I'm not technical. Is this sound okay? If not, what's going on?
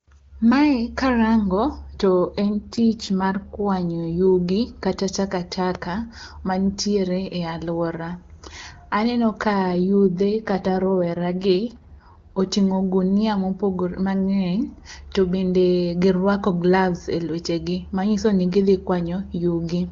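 No. From 2.4 to 3.7 s and again from 9.5 to 12.4 s, the speech turns rough and synthetic, then clears. This is an AMR rate drop: on a weak phone signal, the network briefly gave the voice fewer bits and spent the rest protecting against errors.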